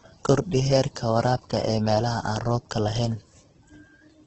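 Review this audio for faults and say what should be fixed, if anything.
Across the whole speech clip you can hear heavy damage that's likely Opus compression. Nothing comes through above 8.4 kHz, and the tonal parts sound grainy and rough rather than swirly, because starved bands get filled with folded or noise content. That fits a bitrate of around 12 kbps. To avoid it, encode at a noticeably higher bitrate so the bands aren't starved.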